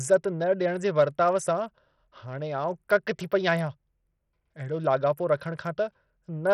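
From start to end, the speech carries heavy damage from likely Bluetooth SBC compression at a starved bit pool, which fits a 64 kbps stream. The top sub-bands get almost no bits, so the treble flickers and a gritty, aliased roughness rides on everything, with nothing above 20.7 kHz.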